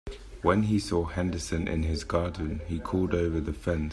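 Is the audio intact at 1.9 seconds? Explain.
Yes, at 1.9 s the speech is intact, with no dropout, click, distortion or other fault at that moment.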